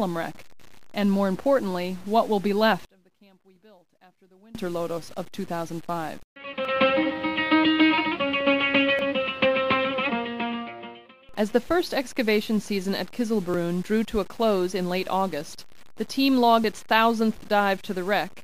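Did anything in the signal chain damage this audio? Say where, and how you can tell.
Yes. One channel inverted, from 2.85 to 4.55 s: the sound collapses to a faint residue about 28 dB down, with the centred content largely gone. The likely cause is a polarity reversal in the analogue wiring or a swapped conductor on one leg, so when the two channels are summed to mono their shared material cancels and only the small difference between them survives.

Dropped buffer (overrun) at 6.65, 8.99 and 13.54 s: each is an abrupt jump forward in the sound with no gap of silence. The first skips about 30 ms and the other two around 10 ms each. This points to the driver or buffer stage, likely an application that failed to read its capture buffer before the hardware overwrote it, so the lost stretch vanishes and the two sides are spliced together.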